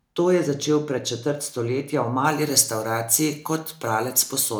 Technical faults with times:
2.25-4.59 pre-emphasis left on

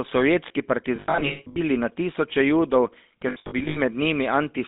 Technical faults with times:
0.00-4.67 GSM full-rate codec
0.96-1.61 lost GSM frames
3.28-3.78 lost GSM frames

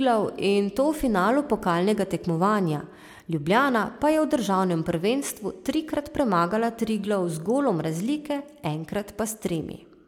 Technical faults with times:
none

